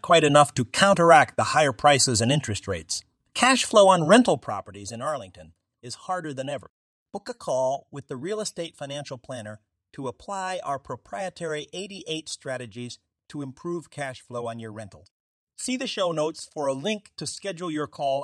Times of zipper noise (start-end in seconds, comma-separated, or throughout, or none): 4.23-4.60